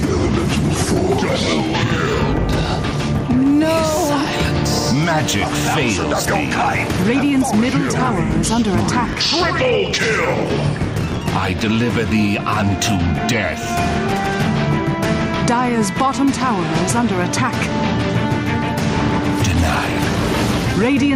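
All the way through there's gain pumping: the level ducks and swells by around 10 dB, likely from input gain set too high with a fast limiter clamping loud moments.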